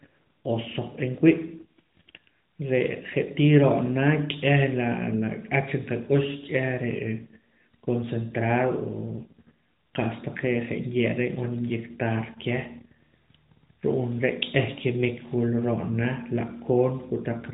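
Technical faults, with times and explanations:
No technical faults can be heard in this speech.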